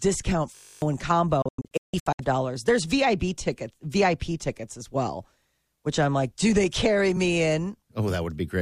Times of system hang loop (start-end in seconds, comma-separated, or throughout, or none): 0.56-0.82